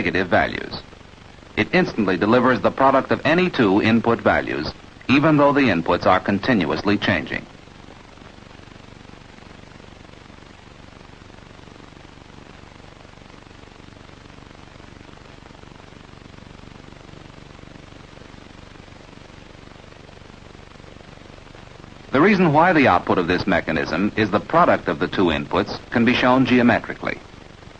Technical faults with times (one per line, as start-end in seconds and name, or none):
none